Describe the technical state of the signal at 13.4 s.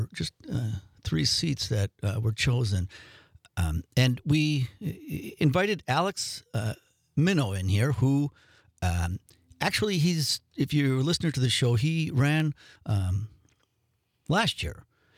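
At 13.4 s you're right in the middle of a run of periodic USB or driver dropouts, which covers roughly 10.40 to 14.39 s. Once a second something stalls the bus or audio driver and a tiny sliver of signal, well under a millisecond, just gets skipped rather than filled in. One of the roughly five drops lands about there, so you hear a small, regular tick or click riding on the sound, spaced a second apart.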